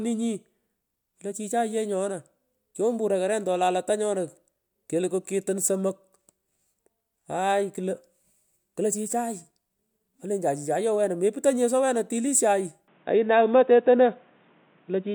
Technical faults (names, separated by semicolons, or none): input switched to a poorer device